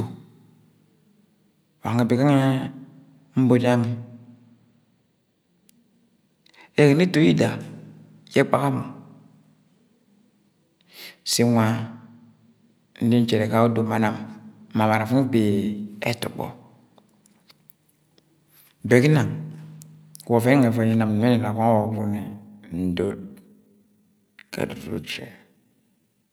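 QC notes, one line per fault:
21.78–26.33 s, time-stretched section: the speech abruptly slows to about 0.64 times its pace while the pitch holds steady. It drags to the end. This is likely software stretching the audio to fit a length by repeating short pieces.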